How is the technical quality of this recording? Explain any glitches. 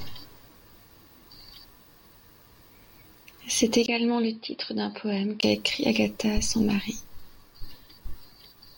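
One glitch degrades the speech. From 3.86 to 5.43 s, likely an input switched to a poorer device: after a 20 ms gap, the sound turns dull and slightly quieter with faint new hiss. The spectrogram shows nothing above 5.3 kHz.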